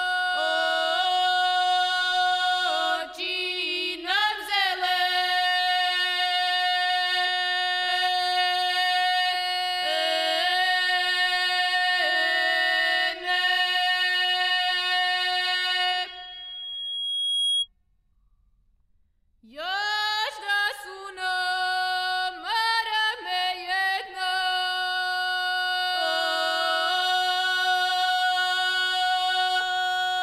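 At 16.06 s a loudspeaker feedback squeal starts. It's a single tone at 3.3 kHz that swells over roughly a second and a half until it sits about as loud as the rest of the sound, then cuts off at 17.68 s. The microphone is hearing the speaker it feeds, and at that one frequency the loop gain has gone above one, so the tone keeps feeding itself until the loop is broken.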